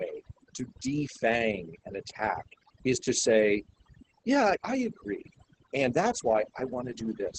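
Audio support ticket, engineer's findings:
Overdone noise removal, throughout. Background pumped down and broken into twinkly specks. Denoiser set way too hard: it's knocking out bands near its noise estimate and taking the quiet parts of the voice with them.

Opus voice compression, throughout, heavy damage. Muffled, hoarse, a bit robotic. Sounds like SILK in wideband mode, so top end stops around 8 kHz and the excitation is coarse. The muffling fits a starved bitrate, around 10 kbps.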